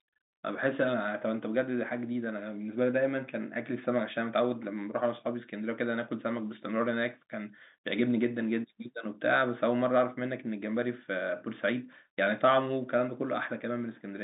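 Speech carried over G.711 mu-law telephone coding at 64 kbps, with the expected line band of roughly 200 Hz to 3.7 kHz and nothing above 3.8 kHz, shows no technical faults.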